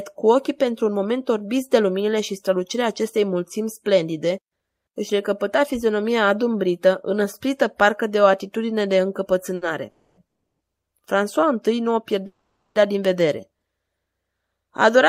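At 9.55 s there is a short stall from a late packet. One packet arrived late and the jitter buffer ran dry for a moment. The receiver held the last sound for about 60 ms, until the packet came in. Playback then carried on from the same point, so nothing is lost. The speech is only stretched, with a faint buzzy hold, and runs about 60 ms later from here on.

Three call audio freezes follow, likely from packets delayed in transit. From 9.89 to 10.19 s the last sound is drawn out into a fading buzz for 280 ms. From 10.27 to 10.62 s there is 330 ms of plain silence. From 12.26 to 12.77 s a 490 ms hold fades away and ends in 140 ms of silence. Each time the speech resumes where it stopped, with nothing skipped. The gaps add to the delay, by 280, 330 and 490 ms.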